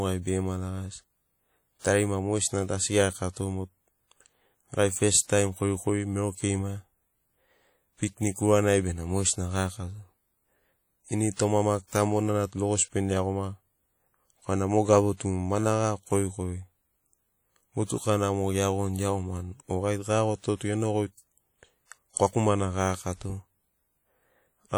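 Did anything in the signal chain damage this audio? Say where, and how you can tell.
Yes. The damage sits at the codec stage. Throughout the speech there is a ringing, washy quality with hiss that swells and fades with the signal. That points to a transform codec, likely WMA compression at around 48 kbps. Bandwidth still reaches 20.1 kHz.

Pre-echo appears from 1.79 to 1.85 s, just before "mogesina tu asi". A short hiss runs about 52 ms ahead of the attack, which sounds smeared. The codec spread noise meant for the loud onset across the quiet start of its block.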